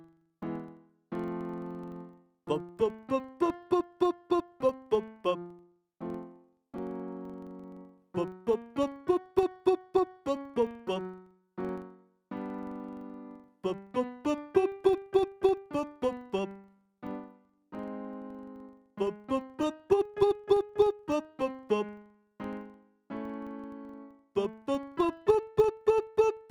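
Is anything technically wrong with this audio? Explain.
Yes. Throughout the clip, a filter restarted on every block forgets its state and begins each block from silence, leaving a small transient at every block boundary. This produces a ticking buzz at 23.4 Hz, which fits a 2048-sample block, and the buzz rises and falls with the signal's level. On a spectrogram it appears as evenly spaced thin vertical stripes; a waveform shows tiny regular spikes.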